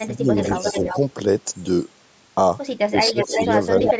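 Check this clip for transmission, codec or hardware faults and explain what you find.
Two kinds of fault turn up, both from a hands-free call where the two sides overlap.

Speech suppressed in double talk, at 0.00–0.36 s, 0.61–0.95 s, 2.88–3.40 s and 3.81–4.00 s: the speech ducks and partly drops out in short pieces. The first dip is roughly 15 dB, the second only a slight 5 dB sag, the third near 20 dB, and the last is an almost complete cut of around 35 dB. The likely cause is an echo canceller that couldn't tell the near talker from loudspeaker echo while both sides spoke, so it attenuated everything.

Echo leak, at 0.44–0.99 s, 3.05–3.54 s and 3.78–3.94 s: a second, delayed copy of the speech trails the original by 344 ms, like a slapback repeat. In the first two stretches it sits about 5 dB below the direct speech, and in the last it is about as loud as the speech itself. The likely cause is a far-end loudspeaker whose echo canceller failed to remove what its microphone picked up, sending that residue back down the line.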